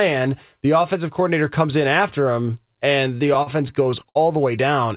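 From 3.18 to 4.17 s the speech has repeated stalls (stutter). Packets arrived late, so the buffer kept running dry. About nine brief holds, up to 60 ms each, drag the sound. Nothing is lost. The band stops at 4 kHz, which fits a G.711 call path.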